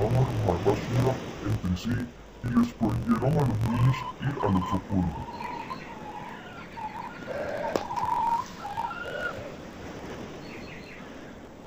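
Throughout, interleaved audio is read as planar: each 21.8 ms block's stereo samples are split into halves and played at half speed, giving an octave-low, doubled sound with choppiness at about 46 Hz.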